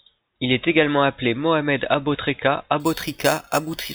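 Speech clip with imaging from sample-and-hold upsampling from 2.80 s to the end: 8 kHz material raised to 44.1 kHz by sample repetition leaves a metallic fizz at 4–8 kHz, about 12 dB down.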